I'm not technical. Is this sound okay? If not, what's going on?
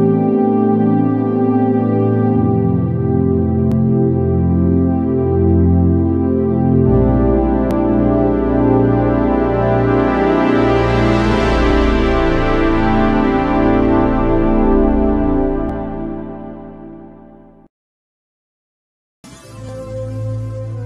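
No. There are tiny skips at 3.72, 7.71, 11.70, 15.69 and 19.69 seconds, about every 4 seconds. Each skip drops only a few thousandths of a second, and the audio on either side is joined straight together with no gap. This is audio missing between chunks. The recorder likely handles sound in 4-second blocks and loses a sliver each time it closes one block and starts the next.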